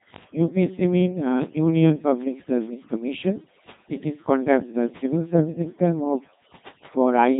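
From the start of the speech to its end, overdone noise removal is present: the noise reduction was set too aggressively, cutting individual frequency bands down whenever they approached its noise estimate. The background drops and breaks up into twinkling specks, and quieter parts of the voice are stripped away.

Running across the whole clip as well is the Codec 2 vocoder sound, with heavy damage. The voice is rebuilt from sine waves driven by pitch, voicing, energy and a spectral envelope, so it comes out robotic and buzzy. Nothing reaches above 3.8 kHz, and the coarseness points to a rate around 2.4 kbit/s.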